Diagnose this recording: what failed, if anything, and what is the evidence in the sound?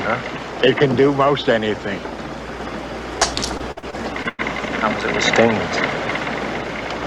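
Network stage: repeated packet loss (robotic sound) from 3.57 to 4.40 s. Six gaps, up to 100 ms, were patched by extending the previous sound, which shows on a spectrogram as stuttering, duplicated blocks.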